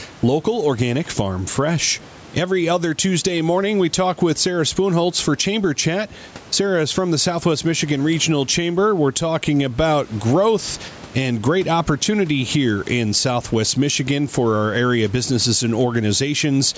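A speech recording with gain pumping from start to finish, with the level swinging by around 10 dB. Loud and quiet passages sit unnaturally close together, giving a squashed, breathing quality. The likely cause is input gain set far too high for the microphone, with a fast limiter or compressor clamping down on every peak. The room noise underneath sits about 31 dB below the speech. The band stops at 8 kHz, as expected from call microphone processing.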